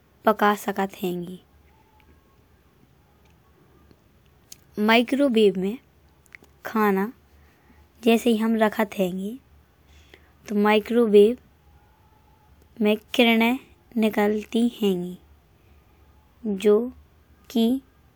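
No technical faults are audible.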